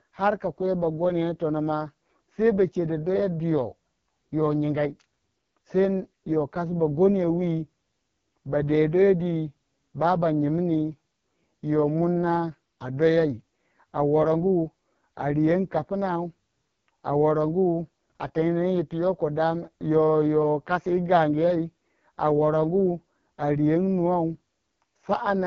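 From start to finish the speech has passed through the AMR wideband (HD Voice) codec at a starved rate, consistent with its lowest 6.6 kbit/s mode. The vocal-tract model is too coarse, leaving the voice rough and raspy, with nothing above 6.8 kHz.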